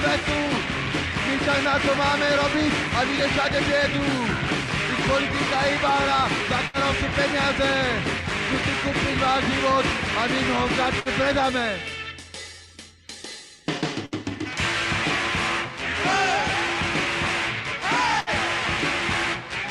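Bursts of packet loss occur at 6.67, 11.00, 14.06 and 18.20 s. Each time, the receiver extends the last sound for roughly 60 ms while fading it, then playback resumes with about 60 ms of audio skipped, producing a brief smeared hold and a jump.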